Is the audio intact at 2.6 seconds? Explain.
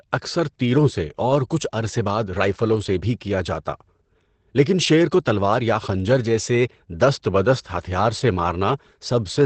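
No. At 2.6 seconds, as across the whole clip, the speech carries Opus voice compression. The linear-prediction SILK coder models the vocal tract and codes the excitation coarsely, which fits a low rate near 12 kbps. The result is plainly audible: muffled, slightly hoarse and robotic speech. On a spectrogram, energy stops flat at about 8.4 kHz, and the harmonics look smeared and grainy rather than crisp.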